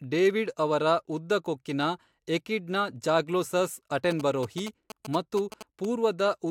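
A galloping dit-dit-dit of short 217 Hz buzzes, sitting roughly 10 dB below the speech, runs from 4.11 to 5.85 s, just after "ಕೊಕ್ಕಿನ ಎಕಿಡ್ನ ಝಾಗ್ಲೋಸಸ್". These are GSM signalling bursts: a nearby 2G phone's brief radio bursts, rectified by the audio circuitry into clicks and buzz.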